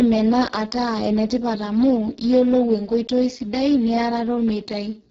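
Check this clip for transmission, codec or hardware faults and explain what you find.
One fault runs through the whole clip: Speex codec compression at a very low quality setting, consistent with roughly 6 kbps. Starved of excitation bits, the CELP coder cannot rebuild the fine structure, so the speech sounds hoarse, noisy and near-robotic, with nothing above 7.7 kHz.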